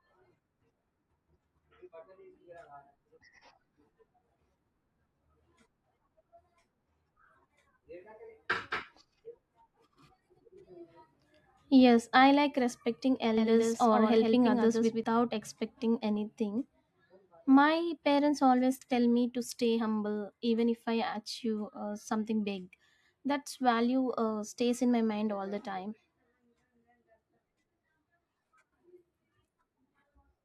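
From 13.4 to 15.0 s, after "I like respecting", a doubled audio track appears. A quieter copy trails about a tenth of a second behind, likely from a second capture path. It cuts off abruptly before "expecting anything".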